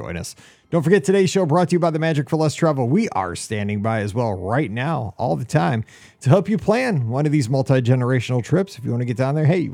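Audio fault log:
No faults are heard in this speech recording. Nothing in it calls for an entry in the log.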